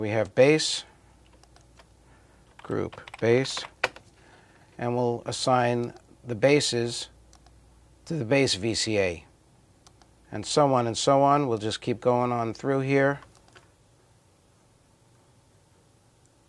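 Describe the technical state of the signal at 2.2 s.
At 2.2 s the audio is intact, with no dropout, click, distortion or other fault to be heard.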